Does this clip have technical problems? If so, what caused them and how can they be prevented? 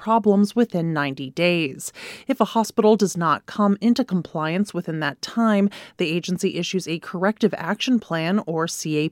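Yes. Between 4.44 and 5.43 s, after "does not come into" and before "the agency issues a", the speech carries five evenly spaced ticks of uneven strength, the longest about 1.5 ms. These are CD scratch ticks: a scratch wiped out more data than error correction could restore on each disc rotation, so the player patched or muted those samples. Cleaning or resurfacing the disc, or ripping it with a secure, multi-pass extractor, would prevent this.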